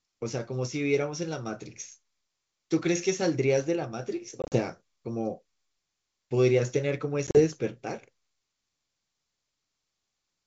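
At 4.42 to 4.58 s and again at 7.27 to 7.43 s, packet loss on the ADPCM call punches hard-edged silent gaps, runs up to 40 ms, into the wideband G.722 speech. The decoder's predictor and step size lose sync, so the sound resumes slightly distorted before settling.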